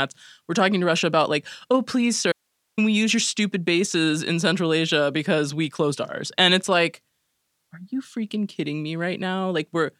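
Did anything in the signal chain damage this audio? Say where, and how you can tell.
Yes. Audio dropout to a faint residue at 2.32 to 2.78 s, before "we use your stupid". Speech cuts abruptly to hiss about 50 dB down, not a fade, likely an intermittent analogue connection.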